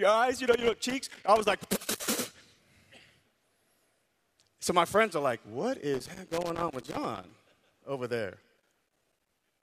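Irregular bursts of scratchy crackle chop through the speech from 0.35 to 2.08 s, from 5.94 to 7.31 s just before "over there", and from 8.57 s, right after "over there", to the end. This is loose connector crackle, a worn contact making and breaking the signal.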